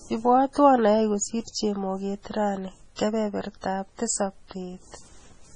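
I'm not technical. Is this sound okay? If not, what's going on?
No. Throughout, the speech sounds watery and swirly, with nothing above about 10.3 kHz, so it lacks crispness. This is heavy MP3 compression, most likely: the encoder dropped the treble and faint details to save space, and those details flicker in and out.

There is also pre-echo from about 2.96 to 2.99 s, right after "kosir chemoget rani". A brief hiss arrives about 32 milliseconds before a sharp sound starts, softening its attack, because the compression noise spread backwards into the quiet moment.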